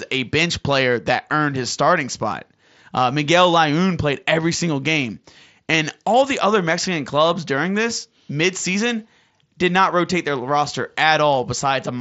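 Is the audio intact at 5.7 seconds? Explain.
No. At 5.73 s, between "played every single game" and "all the other", concealed Bluetooth headset packet loss fills a 7.5 ms gap, consistent with one lost frame, by repeating a best-matching recent stretch. It is nearly inaudible, and the waveform shows only a tiny repeated cycle with no visible spectrogram break.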